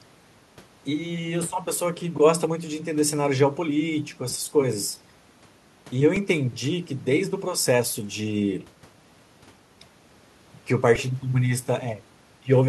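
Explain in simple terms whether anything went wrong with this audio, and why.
The playback device ran short of fresh audio three times and replayed its last tiny slice, a repeated buffer. At 4.34, 6.16 and 10.96 s, a piece under 3 ms long (fitting a 128-sample buffer) sounds again, so the speech gives a brief click or buzz.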